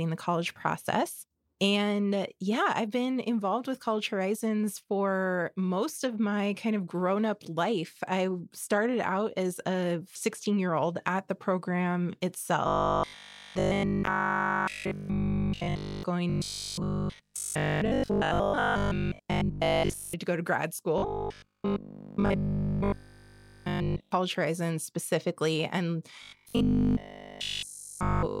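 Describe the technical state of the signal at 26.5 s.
At 26.5 s the signal is in a state of robotic sound from repeated short buffers, a fault running from 26.23 s to the end of the clip at 28.4 s. Fresh audio is arriving too rarely, and essentially all of it is being replaced by the likely repetition of a single short block, which fits a 20 ms buffer. That repetition imposes a fixed 50 Hz buzz, turning the speech into a rigid, metallic drone that only loosely tracks the original.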